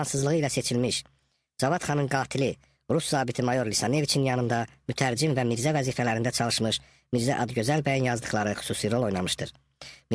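From start to finish, the sound runs fast and sits high: everything moves about 1.38 times quicker than it should and is raised by roughly five and a half semitones, with timing and pitch shifted together rather than separately. That locked pairing is the signature of a wrong sample rate. The samples are being clocked out faster than they were captured, with no conversion, and the ratio fits material recorded at 16 kHz being played back at 22 kHz.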